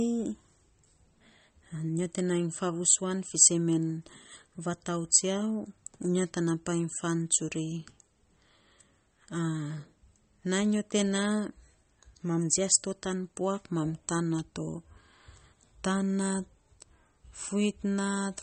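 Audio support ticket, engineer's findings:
Swirly, watery speech throughout, ceiling at 8.4 kHz. Likely MP3 compression short on bits, fits about 32 kbps: treble chopped, weak bands flickering frame to frame.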